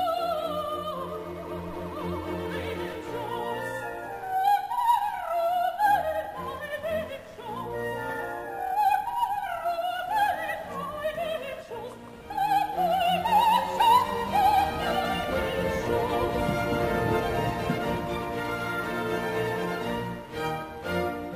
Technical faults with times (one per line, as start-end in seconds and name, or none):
0.00-21.36 computer activity noise